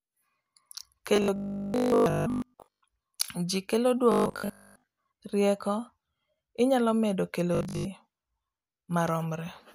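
From 1.16 to 2.82 s, 4.12 to 4.98 s and 7.55 to 7.85 s, the speech turns into a rigid metallic 50 Hz buzz. This is robotic sound from repeated short buffers, likely a 20 ms chunk looped for most of each stretch. Unlike mains hum, it replaces the voice while still roughly tracking it.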